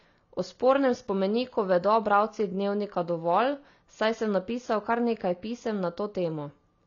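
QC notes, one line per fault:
Throughout: AAC compression. Nothing is heard above 6.9 kHz, so the speech sounds dull. Sibilants and held sounds warble and fizz. The likely cause is low-bitrate AAC-LC, which fits about 24 kbps. It drops the top band and quantises the rest coarsely.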